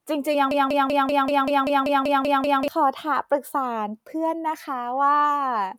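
From 0.51 s to 2.68 s a broken-record loop takes over. The player, encoder or stream most likely stalled and kept sending the last fragment it held instead of new audio. A 193 ms piece of the speech repeats exactly, back to back, 11 times, giving a rapid mechanical stutter with a steady rhythm of about five repeats per second. The speech that should have filled those two seconds is lost.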